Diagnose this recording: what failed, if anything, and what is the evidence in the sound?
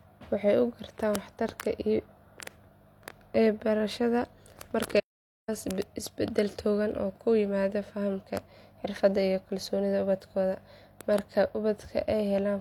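The speech cuts off in mid-flow at 4.99 s and the output goes silent for about 0.48 s, picking up again at 5.49 s with "isbedel togan oo ku". This is a playback stall, and the likely cause sits at the playback stage. Either the player's buffer ran dry, or the thread feeding the output was blocked, so nothing reached the output until it recovered.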